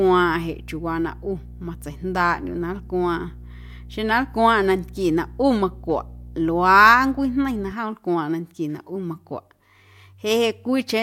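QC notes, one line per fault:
0.0–7.72 s, mains hum: a steady 60 Hz drone with a few low harmonics sits under the speech, roughly 20 dB down, then drops out. That's power-line energy leaking in, most likely through a ground loop or a transformer sitting too close.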